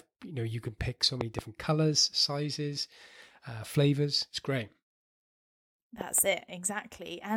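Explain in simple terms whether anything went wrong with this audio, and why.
At 1.02 s, right after "know you can pick", there is damaged data in a compressed stream. Part of the stored data was spoiled. The player lost its place and searched for the next good spot. You hear a brief glitch.

Loud pops come next. Between 1.21 and 1.41 s, after "you can pick so" and before "colors sizes uh flavors", two sharp pops sit on top of the speech. Two more come between 6.01 and 6.20 s. The speech carries on underneath. The likely cause is a sudden electrical jolt, such as a plug, switch or static.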